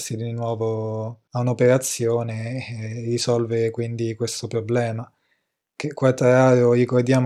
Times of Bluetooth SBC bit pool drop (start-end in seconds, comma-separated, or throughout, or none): 0.36-3.58, 6.49-7.25